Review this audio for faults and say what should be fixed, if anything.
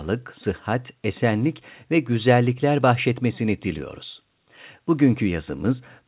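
No faults found; nothing needs fixing.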